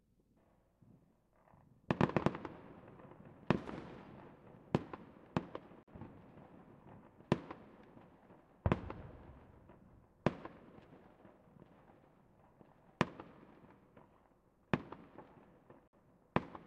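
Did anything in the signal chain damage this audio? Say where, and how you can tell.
Yes, at the codec stage: a gap at a join of encoded pieces. The sound drops to silence at 5.83–5.88 s (47 ms) and 15.88–15.93 s (54 ms), ten seconds apart, with smeared edges, then resumes where it stopped. Encoder delay and final-frame padding were left untrimmed.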